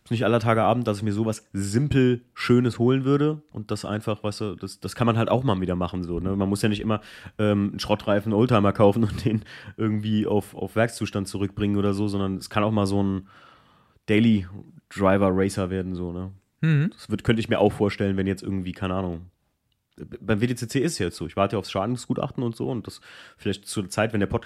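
Listening to this speech recording, nothing technically wrong stood out at any point.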